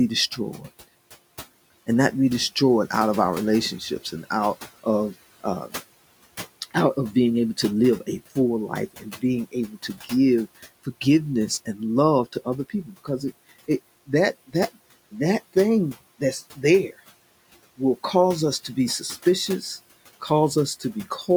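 Between 9.52 and 10.11 s, parts of the speech turn faint and swallowed, dropping by up to about 10 dB over a total of roughly 0.15 s. It happens again from 12.7 to 13.08 s, where the dip reaches about 16 dB. This is speech cut by the noise suppressor: it mistook quiet stretches of speech for the room noise, which sits about 21 dB below the speech, and turned them down with it.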